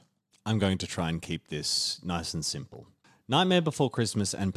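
Nothing stood out as a technical problem on listening to this short speech recording.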